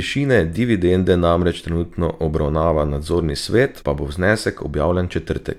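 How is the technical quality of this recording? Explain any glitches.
One glitch stands out, at 3.81 s in the speech: a stream segment skipped. A segment of the stream likely failed to load, so the player carried on with the next one. A chunk of the programme is missing, and the sound jumps abruptly forward with a brief blip.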